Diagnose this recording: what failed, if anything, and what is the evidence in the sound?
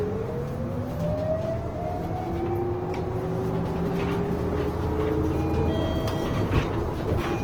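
Codec stage, likely Opus compression at a low rate near 16 kbps in music mode: the audio throughout turns noisy, rough and grainy, with full bandwidth up to 20.2 kHz.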